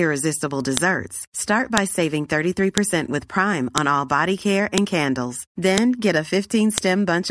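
At 0.77, 1.78, 2.78, 3.78 (just before "all body care"), 4.78, 5.78 and 6.78 s, a file header played as audio: one-second speech pieces joined with WAV headers intact, so header bytes become samples. Each is a sharp snap, seen as a lone waveform spike and a full-height vertical spectrogram line.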